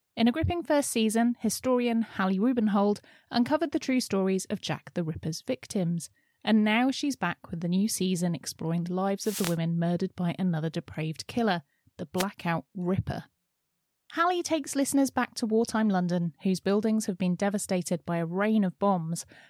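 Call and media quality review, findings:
Wireless microphone noise hit, 9.20–9.58 s, after "new season exploring the", before "murdered by another depraved": about 0.38 s swish of static over the speech. Second, shorter hit at 12.16–12.25 s, after "another depraved killer the". Component: analogue FM radio link, where reflections cancel the carrier and receiver noise surges. Differs from a network dropout: the sound fills with hiss rather than going silent or turning robotic.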